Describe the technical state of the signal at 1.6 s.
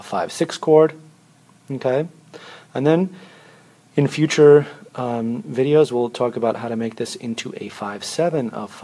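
At 1.6 s the signal is intact, with no dropout, click, distortion or other technical fault audible there.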